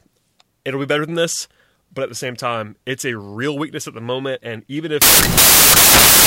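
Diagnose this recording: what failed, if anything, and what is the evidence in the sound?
A sample-format conversion fault: from 5.02 s to the end at 6.26 s, samples were built from the wrong bytes, so the rapidly varying low-order bits became the dominant part of each value. The speech turns into loud, harsh broadband noise.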